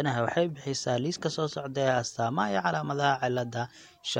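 A corrupt frame decoded at 1.28 to 1.30 s, just after "waxay bixisaa liiska": flipped bits in what sounds like a single compressed frame were decoded anyway, misplacing energy across frequencies and producing a brief chirp-like blip peaking at roughly -30 dBFS.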